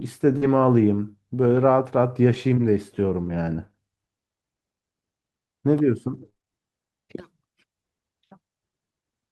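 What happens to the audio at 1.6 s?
Around 1.55 to 1.57 s the speech turns briefly rougher and noisier, with no gap or dropout. This is a lost packet rebuilt from error correction: the next packet carried a low-bitrate copy of the missing frame, which the decoder played instead, and the span fits a single 20 ms packet.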